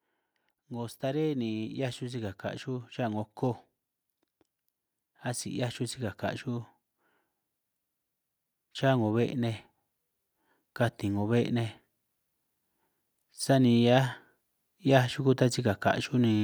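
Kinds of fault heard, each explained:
Automatic gain rising: from 0.68 s to 3.34 s the level climbs by about 6 dB, and the voice and the background noise floor swell together. This happens because an automatic gain control judged the input too quiet and raised its amplification step by step rather than at once. On a waveform the envelope widens steadily across those seconds. On a spectrogram the speech bands and the noise between phrases both brighten evenly over that span.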